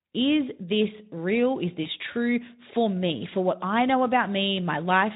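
At 1.83 to 1.87 s, just before "true for me for", VoIP packet loss concealed by the speech codec: about 20 ms went missing, fitting one lost frame. The Speex decoder extrapolated the previous pitch and filter at falling gain, so the speech briefly smears into a fading, stretched sound. On a spectrogram, harmonics flatten and dim there, and the waveform shows a short, shrinking stretch.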